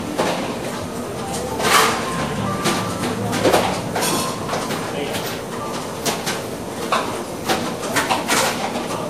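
Throughout the clip the sound carries two layers of coding damage at once: the artefacts of one codec are heard together with those of another, and nothing is heard above 15.6 kHz. That mix of unlike artefacts points to transcoding between lossy codecs, likely an earlier WMA encode at a moderate rate re-encoded to low-rate Vorbis. A single lossy encode would show one consistent artefact character rather than two overlapping ones.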